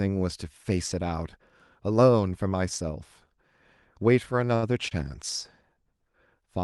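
At 4.55 to 4.64 s, and again at 4.88 to 4.93 s, there is a short stall from a late packet. A packet arrived late and the jitter buffer ran dry. The last sound was stretched, by 70 ms and then 26 ms, so it drags briefly. Nothing is lost.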